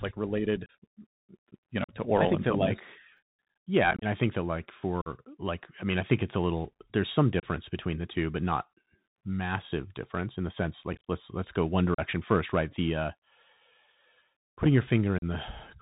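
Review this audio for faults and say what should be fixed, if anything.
The whole clip carries the sound of a Bluetooth CVSD headset codec. Everything above 4 kHz is gone, s sounds come out scratchy, and a grainy hiss sits under the speech, which fits a 64 kbit/s one-bit delta link whose adaptive step can't keep up with loud, bright sounds. Unlike a generic low-bitrate codec's warbly, smeared artefacts, this is slope-overload roughness and granular noise. Fix it by moving the headset to a wideband codec such as mSBC, or by recording from a wired microphone.

Unconcealed Bluetooth headset packet loss punches short, hard-edged holes into the speech at 0.66 s, 1.84 s (just before "oral I think that"), 3.91 s, 5.01 s, 7.40 s (between "a little there's some" and "between the two but"), 10.93 s, 11.94 s and 15.18 s. The holes last about 30 to 80 ms. At 3.91 s the holes are scattered over about 105 ms, and at 10.93 s over about 135 ms, which sounds like crackle rather than a single gap. 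Each hole matches a handful of lost few-millisecond packets replaced by silence, and the speech returns briefly quieter. Dropouts from buffer underruns tend to be longer and regular, not clustered crackle. Fix this by reducing radio interference and distance, or by enabling packet loss concealment on the link.

Chunks out of order appear at 3.17 s, right after "I think that like". A 10 ms chunk plays one position late, giving a brief jumbled flicker with hard joins. Nothing is missing, which is what separates it from the packet-loss holes elsewhere. Fix it by sequencing incoming audio blocks by timestamp before writing them out.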